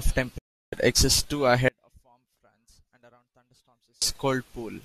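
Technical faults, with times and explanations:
0.38 to 0.73 s, digital broadcast dropout: the speech fades out over about 8 ms and stays muted for 336 ms, as the receiver does when frames fail their checks.
1.68 to 4.02 s, audio dropout to a faint residue: the speech cuts out abruptly for about 2.3 s, leaving only a faint sound roughly 35 dB below the signal, likely from a signal break ahead of a live path.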